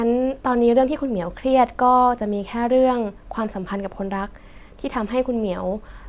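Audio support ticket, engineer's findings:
No faults found in playback.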